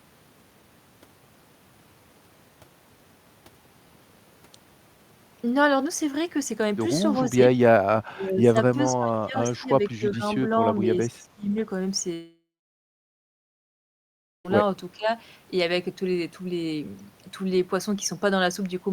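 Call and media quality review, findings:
Speech suppressed in double talk: dips at 8.04–8.56, 8.93–9.70, 9.89–10.24, 11.09–11.54, 14.96–15.08 s, up to about 30 dB. Likely echo canceller attenuating.

Long network dropout: 12.13–14.46 s, about 2.3 s lost. Concealment buzz fades into roughly 2 s of silence, then resumes later. Likely packet loss, unlike the brief partial dips.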